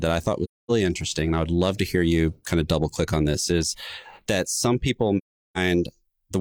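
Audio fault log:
0.44–0.71 s and 5.17–5.58 s: AAC frame loss with muting. The sound drops to silence for roughly a quarter and then four tenths of a second, which fits six and nine lost frames zeroed by the decoder. Overlapping windows fade the edges, so the holes are soft-edged.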